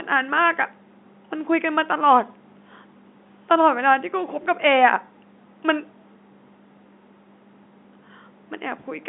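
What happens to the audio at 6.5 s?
Nothing goes wrong at 6.5 s: the speech carries on intact through that moment, with the narrow telephone band of the G.711 line as the only colouring.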